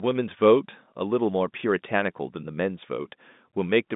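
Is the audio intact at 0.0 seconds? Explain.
Yes, the audio is intact at 0.0 seconds, with nothing amiss beyond the narrow telephone band of G.711 telephone coding, which carries the speech only up to about 3.8 kHz.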